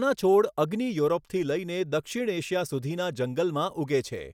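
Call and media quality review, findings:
No faults detected in playback.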